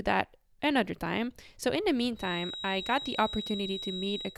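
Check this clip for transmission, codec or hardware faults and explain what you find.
One fault is present. A feedback whistle enters at 2.14 s and continues to the end of the speech. It is a thin, steady tone at 3.8 kHz, sitting about 10 dB below the voice and swelling and fading slowly in level. The likely cause is a loudspeaker feeding back into the microphone with loop gain held just under the point of runaway. That lets one high frequency keep ringing without growing louder.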